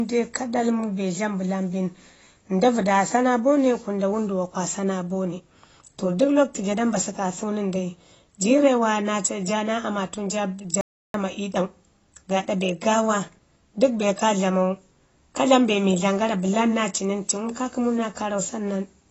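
Right from the start the speech sounds dull and smeared, with a fizzy edge and nothing above 8 kHz, most likely heavy AAC compression at a low bitrate around 24 kbps. At 10.81 s there's an audio dropout to silence: about 0.33 s of silence, no room tone, likely from the input briefly cutting out.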